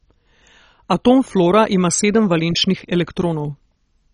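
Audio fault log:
throughout, MP2 compression: the speech sounds dull and nothing is heard above about 10.4 kHz, with a gurgling, granular roughness across the clip. This is likely heavy MPEG Layer II coding at a low rate. Sub-bands starved of bits switch off or flicker, and the remaining bands are coarsely quantised.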